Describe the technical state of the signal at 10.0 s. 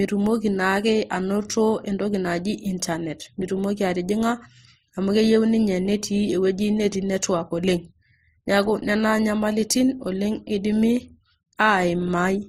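At 10.0 s, as throughout, the speech shows likely transcoding between lossy codecs, MP3 then Opus at bitrates around 43 and 32 kbit/s, layering their artefacts together; spectrograms show nothing above 15.7 kHz.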